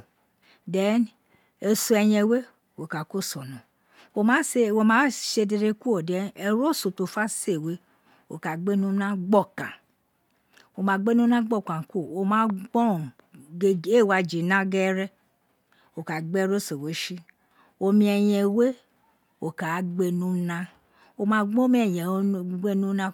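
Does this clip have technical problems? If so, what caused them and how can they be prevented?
Yes: a single loud pop at 12.50–12.52 s stands a few decibels above the speech, likely from a voltage spike such as a switch or static discharge. Unlike a dropout, the speech continues unbroken beneath it. Keep connections secure and avoid switching or plugging gear in while recording.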